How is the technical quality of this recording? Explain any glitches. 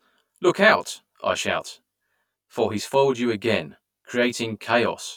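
The recording has one fault, present from start to finish: channel delay causing comb filtering across the whole speech clip. One channel arrives roughly 20 ms after the other, and the two are summed to mono. Components common to both channels cancel at evenly spaced frequencies, with the first notch down near 30 Hz and further notches repeating up the spectrum. The speech sounds rough and slightly doubled throughout.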